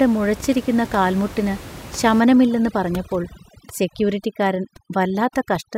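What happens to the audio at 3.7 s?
At 3.7 s the clip is under overdone noise removal, which runs from 2.2 s to the end. The suppressor cuts bands near its noise estimate nearly to silence, taking quiet speech detail with them. The background drops and breaks up into twinkling specks. On a spectrogram, the gaps between words show near-black areas dotted with isolated bright specks.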